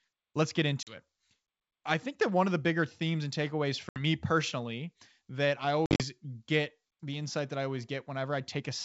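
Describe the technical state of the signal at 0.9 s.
At 0.9 s there is packet loss on an ADPCM call, from 0.83 to 0.98 s. A few packets, about 40 ms, become hard-edged silence. Unlike a plain dropout, the decoder's predictor and step size then mismatch the sender's, so speech returns distorted before settling.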